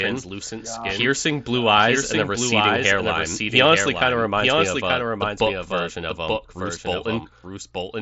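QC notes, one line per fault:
Throughout, doubled audio track: a second full-band copy of the speech runs about a second behind the original and roughly 5 dB quieter, so every phrase returns once, clean and dry. Unlike an echo or reverb, the repeat has no decay tail, no room colouring and no further repeats. The likely cause is a second capture through a slower path. Both copies share the headset codec's ceiling near 7.7 kHz.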